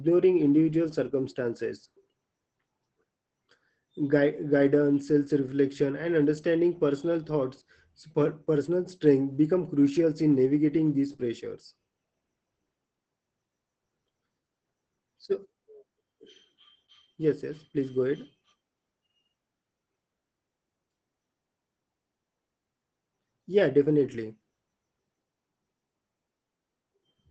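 Opus voice compression affects the speech for the whole clip. The SILK linear-prediction coder is running in wideband mode, and the sound points to a low bitrate of around 12 kbps with 20 ms frames. At that rate the excitation is coded coarsely, so the damage is plainly audible. The speech comes across muffled and hoarse, with a faint robotic edge. Above 15.8 kHz the spectrum is empty.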